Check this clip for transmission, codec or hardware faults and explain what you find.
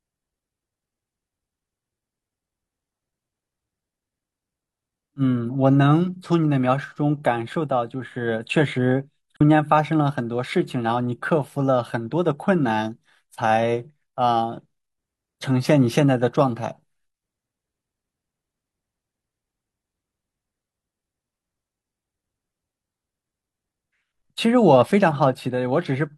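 One codec fault is present in this speech. At 9.37 to 9.41 s, AAC frame loss with muting: a 43 ms gap, consistent with one lost frame, decoded as silence and faded through overlapping windows, leaving a brief dip.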